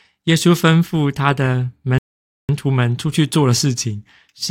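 At 1.98 s the speech stops dead and falls to silence. This is a rebuffering stall. The player used up the audio it had downloaded and had to wait for more data. Playback picks up again at 2.49 s, exactly where it broke off. No sound is skipped or repeated. The gap simply inserts about 0.51 s of dead air into the clip, so the speech is interrupted rather than damaged.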